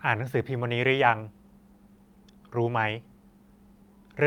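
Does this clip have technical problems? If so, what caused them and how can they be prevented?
No, this clip has no technical problems, so there is nothing to trace to a cause or to prevent.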